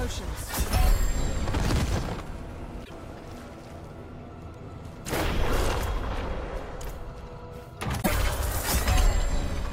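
At 2.84–2.91 s and again at 8.01–8.08 s there's a brief glitch, a chirp, noise burst or short hole, about 70 ms, roughly three 26 ms frames, where the audio jumps forward, likely a broken MP3 bit reservoir with frames decoding from the wrong borrowed bytes.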